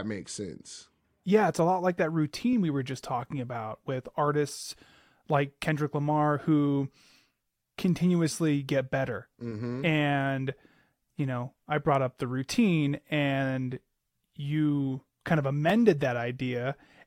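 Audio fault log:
2.53 s and 15.70 s, repeated buffer: an 11.6 ms block, fitting a 512-sample buffer, plays twice with a hard join after "a lot like that" and "and you kind of". Late audio forced a replay of the last buffer, so each repeat is a brief click with essentially no audio lost.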